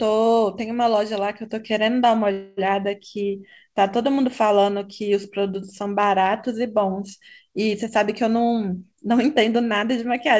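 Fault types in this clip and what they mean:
Call audio freeze: the last sound stretches into a fading buzz or hiss for about 0.25 s, likely a stalled jitter buffer; unlike a dropout, nothing is lost, only delayed.
Jitter buffer speed-up: from 7.88 s to the end, audio runs about 7% fast at unchanged pitch as roughly 0.2 s of pitch periods are trimmed, unlike resampling.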